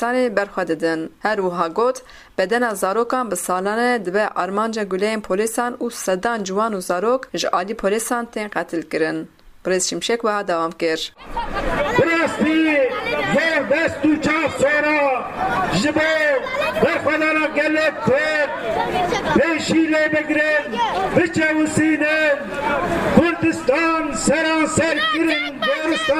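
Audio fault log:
12.5–17.89 s call bitrate drop: the sound turns rough and muffled as the highs vanish, which points to the encoder going from about 64 to about 22 kbps, bottoming out for 4.07 s.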